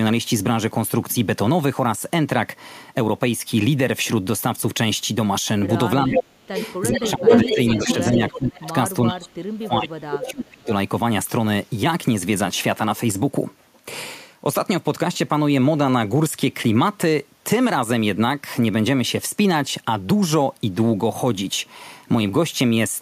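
From 6.03 to 6.56 s there is speech suppressed in double talk. The echo canceller likely mistook this talker for loudspeaker echo while both sides were active, so it pulled the voice down in pieces. Over about 0.4 s the level dips by as much as roughly 25 dB. At 6.18 to 6.23 s an echo leak brings back a delayed copy of the far voice, 409 ms late and about as loud as the speech. The canceller likely missed part of what its microphone picked up from the loudspeaker and passed it back.

From 6.55 to 8.6 s a longer echo leak returns that voice 418 ms late, around 5 dB above the speech. It overlaps a second suppression from 6.88 to 8.74 s, where about a second of speech drops by up to roughly 15 dB. A third suppression runs from 9.07 to 10.71 s and cuts about 1.5 s by up to roughly 30 dB. Within it, short echo scraps return at 9.23 to 9.28 s (428 ms delay, roughly 25 dB under the speech) and at 10.22 to 10.31 s (434 ms delay, roughly 10 dB under).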